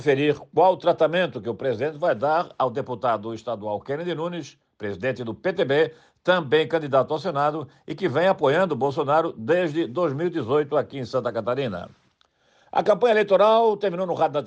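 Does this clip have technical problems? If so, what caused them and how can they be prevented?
No, no technical problems detected.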